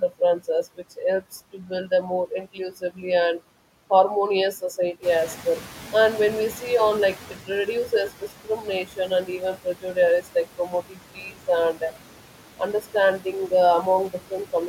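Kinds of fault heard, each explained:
Noise suppressor artifacts: All through this speech clip a suppressor is working band by band, pulling steady background down by about 12 dB. You can hear it gating with the talking: the noise drops away in the gaps and rises back under the words, the tell-tale sign of frame-by-frame gain changes.
Noise suppressor catching up: Around 5 s the room noise jumps by about 12 dB, and the suppressor's noise estimate doesn't keep pace. Right after "more inclusively and harmonious", from 5.02 to 7.41 s, the louder background comes through with less reduction, then gradually settles as the estimate adapts over roughly 2.4 s, ending at about 10 dB of cut. After that the noise sits about 18 dB under the speech.
Speech cut by the noise suppressor: Between 8.21 and 8.67 s, just before "and even prejudice", the suppressor mistakes some quieter speech for background and turns it down with the noise, by about 9 dB at the deepest point. 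Only around a tenth of a second is affected in total, but those bits sound swallowed and faint, like soft edges of the sound being clipped off.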